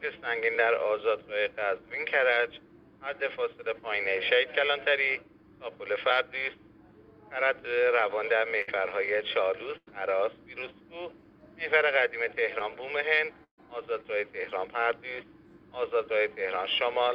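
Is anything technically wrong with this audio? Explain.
Yes. A burst of packet loss occurs at 8.61–8.69 s, 9.77–9.89 s and 13.44–13.60 s: consecutive packets were lost or arrived too late, so the receiver stretched and faded the last sound before skipping ahead. About 60, 100 and 140 ms go missing, and the third gap ends in roughly 110 ms of silence.

Short concealed packet loss at 12.59–12.62 s drops about 20 ms; the decoder patches it by extending the preceding sound, leaving a brief smear or wobble.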